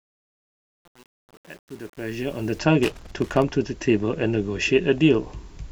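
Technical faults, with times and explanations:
0.00–2.59 s, truncation distortion on the fade: the sound is gritty, worst right through to about 2.56 s. The fade stage seems to keep only around 8 bits with no dither, so the quiet waveform collapses into coarse square steps.
2.83–3.42 s, loose connector crackle: an irregular burst of scratchy crackle cuts across the sound for a bit over half a second. A worn or dirty contact making and breaking would chop the signal like this, with any DC on the line popping.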